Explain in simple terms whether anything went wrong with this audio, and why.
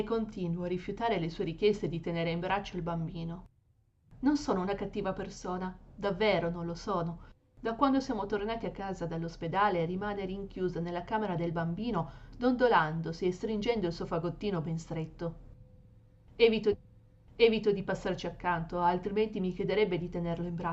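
Something did go wrong, at about 16.72 seconds. A stream segment repeated: the player fetched or queued the same chunk of the stream twice, so one second of sound, from 16.72 to 17.72 s, plays again right after it first played. At the point where the playback jumps back, a brief blip can be heard, because the sound is cut mid-flow and restarted. The clip ends up one second longer than it should be.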